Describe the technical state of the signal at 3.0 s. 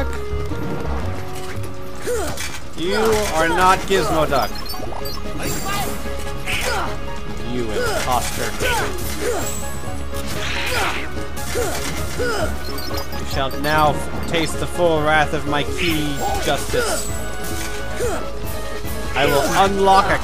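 At 3.0 s the signal is intact, with no audible fault at that point.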